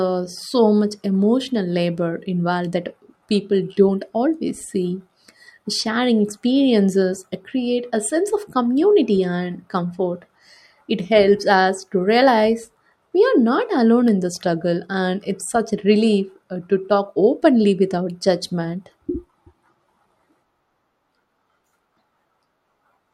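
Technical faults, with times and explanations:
No technical faults are audible anywhere in the recording; the signal stays continuous and stable throughout.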